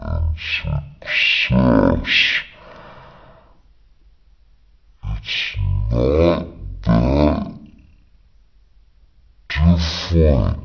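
Throughout, a wrong sample rate drags speech to 0.363 speed, 17.6 semitones lower, fitting 44.1 kHz audio played at 16 kHz; spectrogram harmonics squeeze downward.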